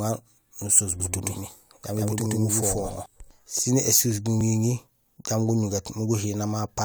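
From 1.00 s to 3.06 s, just before "sin ésuus", the speech has a doubled audio track: a second, full-band copy at about equal level trails the original by roughly 150 ms. It has no decay or room colour and starts and stops abruptly, likely from a slower duplicate capture path or an edit holding two offset copies.

At 4.41 s, just after "sin ésuus", there is an overlap between stream segments. Two segment timestamps overlap, and the player trims the shared span, dropping a few milliseconds of real audio. The waveform jumps there, heard as a tiny skip, which fits segment boundaries about 2 s apart.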